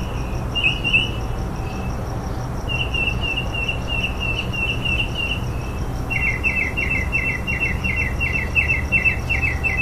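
No technical faults can be heard anywhere in the recording.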